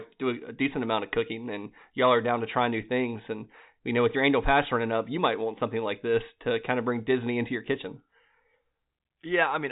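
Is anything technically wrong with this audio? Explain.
No, nothing stood out as technically wrong on listening to this speech clip.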